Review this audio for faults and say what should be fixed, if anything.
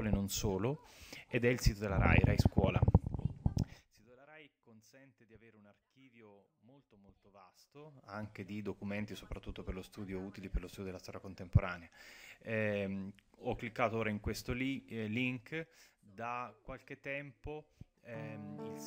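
Zipper noise ticks through the level moves at 3.53–4.09 s, 7.52–8.27 s and 15.23–16.07 s, since the gain jumps in unsmoothed 3 dB steps. Ramp gain per sample or interpolate to prevent it.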